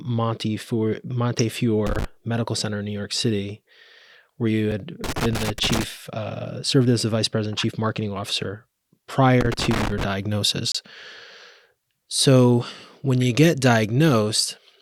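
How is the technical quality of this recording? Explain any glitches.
The recording has two kinds of glitches: three bursts of loose connector crackle and two short silent holes from gaps between stream segments.

The loose connector crackle comes at 1.86 to 2.05 s, at 5.04 to 5.84 s (right after "where you" and running up to "uh served as the"), and at 9.41 to 10.03 s. A worn or dirty contact is making and breaking as it moves, so the signal gets chopped in quick, uneven bursts. You hear that as irregular scratchy crackle laid over the speech, and the middle burst is the longest at about 0.8 s.

The gaps between stream segments fall at 4.71 s, just after "where you", and at 10.72 to 10.75 s. They're about 6 s apart, which fits a stream cut into 6-second segments whose time stamps don't quite meet. The player fills each hole with silence, about 5 ms the first time and about 27 ms the second. 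You hear a hard-edged dropout, but nothing is actually cut from the audio because the silence is inserted.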